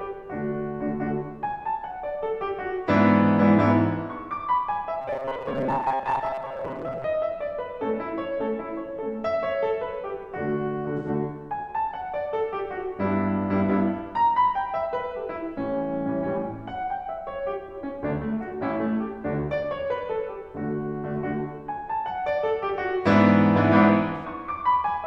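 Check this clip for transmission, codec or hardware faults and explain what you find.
The music carries three faults of two kinds: a robotic buzz early on and two brief AAC dropouts.

From 5.01 to 7.05 s there is robotic sound from repeated short buffers. The music takes on a rigid, metallic buzz at 134 Hz. This is likely caused by audio arriving late and being filled by looping the last chunk. That period fits a buffer of about 7.5 ms, with roughly half the sound repeated. Unlike a frame dropout, the buzz holds a steady imposed pitch for about two seconds.

At 10.97 to 11.09 s and 24.16 to 24.25 s there is AAC frame loss with concealment. Each gap lasts 85.3 ms, which fits two lost frames. The decoder patches it from the last good spectrum, so each sounds like a short smeared, phasey blur with no fixed buzz pitch.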